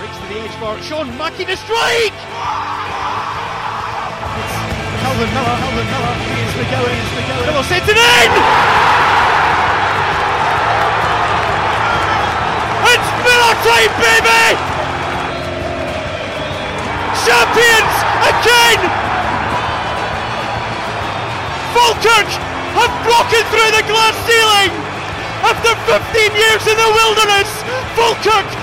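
A doubled audio track runs from 2.86 to 7.96 s: a second full-band copy trails about half a second behind, some 5 dB quieter, starting and stopping abruptly. On a spectrogram every feature repeats at a fixed offset, likely from a slower capture path.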